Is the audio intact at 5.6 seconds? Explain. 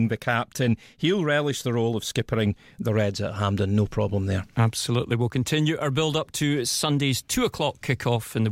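Yes, the speech at 5.6 seconds is intact, with no audible fault at that moment.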